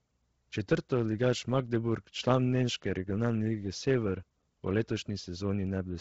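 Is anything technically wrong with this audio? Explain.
Yes. Throughout the speech, the sound is breathy and grainy with nothing above 7.8 kHz, likely Bluetooth LC3 compression, fitting roughly 16 kbps with 10 ms frames; a spectrogram shows a hard ceiling and noise-filled, smeared upper bands.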